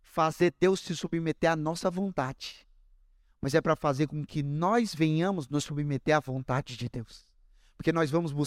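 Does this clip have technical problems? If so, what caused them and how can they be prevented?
Yes, there's a single loud pop in the speech from 3.43 to 3.45 s, right before "é para fazer com". It's a sharp click that peaks a few decibels above the voice, while the speech keeps going underneath. That points to a sudden voltage step or spike getting into the signal chain, with the circuitry after it shaping the spike into a brief thump. The likely culprit is a static discharge, a cable or plug being nudged, or a switch being flipped mid-take. To prevent it, secure the connectors, avoid touching switches or cables while recording, and keep static down around the gear.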